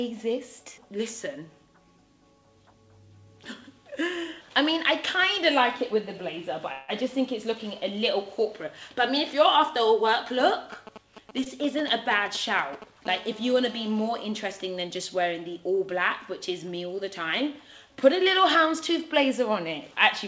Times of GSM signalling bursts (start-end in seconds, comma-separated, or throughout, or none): 10.40-13.07